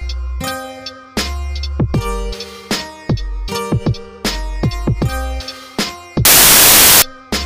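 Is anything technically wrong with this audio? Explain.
Yes. Samples built from the wrong bytes, from 6.25 to 7.02 s: the bytes of each sample are assembled in the wrong order or alignment, so the rapidly changing low-order bits dominate each value. The sound turns into loud, harsh broadband noise for that stretch.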